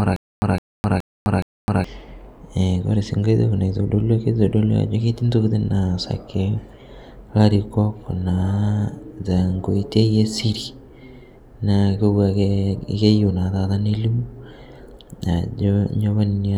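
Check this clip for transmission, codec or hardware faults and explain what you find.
One transmission fault is present: a stutter with silent gaps, already under way when the clip opens and lasting until about 1.84 s. A fragment of about 163 ms of speech plays, then about 257 ms of dead digital silence follows, and the pair repeats every 420 ms, four times in all. The likely cause is a stalled stream that replays its last buffered fragment at each retry before running empty, so the speech due in those gaps is lost. Unlike a simple dropout, the same burst returns at a strict, even pace.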